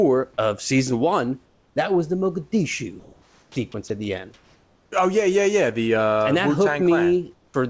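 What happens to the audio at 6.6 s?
Nothing goes wrong at 6.6 s: the speech carries on intact through that moment, with no dropout, glitch or distortion.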